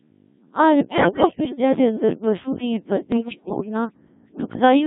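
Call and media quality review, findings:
Codec 2 vocoder, throughout: robotic, buzzy speech with heavily smeared detail. The sound points to a very low-rate mode, around 1.3 kbit/s. The decoder rebuilds the voice from sine waves using only pitch, voicing, energy and envelope, so the original waveform is lost.

Bit errors on digital voice radio, 0.89–1.56 s (ending just before "दे अंदर बर्फु दियें") and 3.12–3.69 s (right after the same phrase). Symptoms are sudden pitch and level jumps, warbles and bleeps. The likely cause is corrupted vocoder frames at the edge of coverage. The first burst sounds worse, with a heavier error rate.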